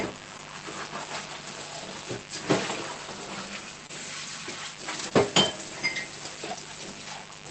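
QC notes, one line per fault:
Throughout: mains buzz. Switching spikes from a dimmer, rectifier or poorly shielded lead have entered the chain twice per 50 Hz cycle, stacking harmonics into the kilohertz range. This gives a steady, raspy buzz sitting roughly 15 dB below the sounds.
0.37–0.41 s, 3.87–3.91 s, 5.09–5.13 s: short concealed packet loss. About 20 ms of audio per event never reached the decoder in time, so the receiver extended the preceding sound and blended back. Each gap comes through as a brief smear or wobble in the sound.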